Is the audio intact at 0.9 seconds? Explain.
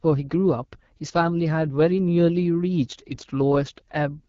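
No. At 0.9 seconds the speech is already marked by the AMR wideband (HD Voice) codec, which affects the whole clip rather than a single moment. The codec rebuilds speech below 6.4 kHz from a pulse-excited vocal tract model and fills the top band with shaped noise, and nothing is present above about 7.5 kHz. The damage is plainly audible: a rough, raspy texture that fits one of the two lowest modes, around 8.85 kbit/s.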